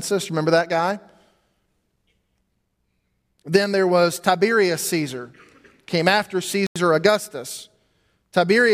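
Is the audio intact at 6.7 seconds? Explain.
No. From 6.67 to 6.76 s the speech cuts to about 90 ms of silence and then carries on: a Bluetooth stall, most likely interference holding up packets until the headphones' buffer ran dry. Unlike a crackle or click, it is a complete gap of silence.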